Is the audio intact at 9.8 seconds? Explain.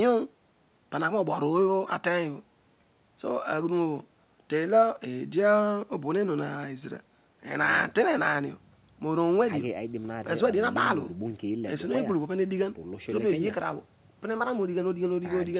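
Yes, the speech at 9.8 seconds is intact, with no dropout, glitch or distortion there beyond the narrow telephone-band sound of the call path, which carries nothing above 4 kHz.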